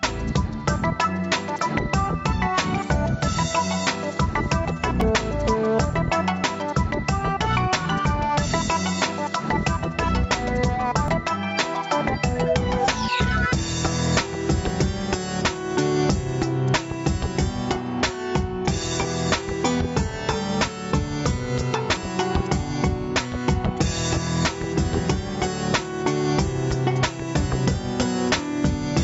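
Gain pumping runs through the whole clip, with the level swinging by around 15 dB. This is likely input gain set far too high for the microphone, with a fast limiter or compressor clamping down on each peak and releasing in between, so loud and soft passages are pressed close together and the sound comes across squashed, even within the 8 kHz band of the call path.

A dropped buffer (overrun) is heard at 1.59 s, then again at 5.01, 11.08, 14.70 and 21.97 s. Each time the sound jumps forward with no silence in between. The likely cause is that the samples weren't read before the hardware overwrote them, so that stretch is lost and the two sides are butted together. The skips at 1.59 and 21.97 s are longer, about 30 ms each, and the other three are about 10 ms.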